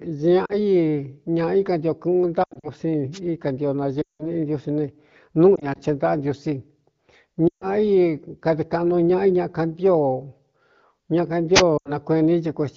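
Lost AMR speech frames break the speech at 0.45, 2.43, 4.01, 5.56, 7.47 and 11.77 s. Radio errors corrupted the frames, so the decoder repeated its last good settings at falling gain. Gaps run 40 to 180 ms. At 2.43 and 5.56 s they scatter over 200 ms. At 4.01 s the sound drops to near silence, then returns rough.

Wireless microphone noise hits come at 3.12 and 11.54 s, each 70 to 80 ms long. The FM radio link faded as reflections cancelled, and receiver noise rose over the signal. Each is a short swish of static on top of the light AMR-WB coding at 15.85 kbit/s.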